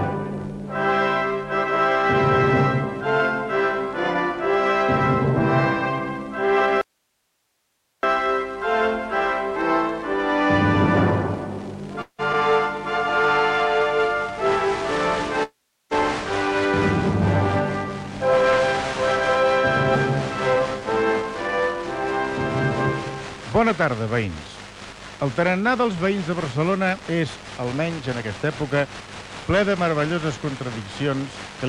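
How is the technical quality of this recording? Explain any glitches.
The recording has repeated transmission glitches typical of a network call, including a hard dropout, two freezes, several timing adjustments and a forward skip.

Audio dropout to a faint residue, 6.81 to 8.03 s: the wanted signal vanishes abruptly for about 1.2 s, likely from a break in the path while the input stayed live. Only hiss remains, roughly 50 dB below normal level. On a waveform it appears as a near-flat band, and on a spectrogram as faint broadband noise with hard edges.

Call audio freeze, 12.01 to 12.21 s and 15.43 to 15.93 s: playback likely stalled because packets arrived late and the jitter buffer emptied. The last sound is stretched into a fading buzz or hiss, then silence of about 80 ms and 370 ms respectively. The audio resumes where it left off, adding 172 ms and 478 ms of delay. A spectrogram shows smeared, decaying horizontal streaks before a blank gap.

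Short concealed packet loss, 12.33 to 12.35 s: about 40 ms of audio never arrived in time. Only a 5 ms patch was synthesised from the preceding sound before the decoder blended back into the real audio. It is heard as a tiny smear. On a spectrogram it is a thin vertical seam.

Jitter buffer speed-up, 14.82 to 19.46 s at 101% and 26.85 to 29.29 s at 110%: the buffer was draining surplus audio by cutting out pitch periods. This removed about 50 ms in the first stretch and about 300 ms in the second, the second of which sounds noticeably hurried at unchanged pitch. A spectrogram shows compressed timing with no change in frequency.

Skip ahead, 19.94 to 19.97 s: roughly 200 ms of audio was dropped and the two sides were spliced with a 6 ms bridge. Playback jumps forward almost seamlessly. On a waveform the envelope changes abruptly at a single seam.

Jitter buffer slow-down, 20.54 to 23.12 s: the receiver repeated pitch periods to rebuild its reserve, adding 68 ms and running at 98% speed. 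Sounds are slightly drawn out. A spectrogram shows stretched segments with unchanged harmonic spacing.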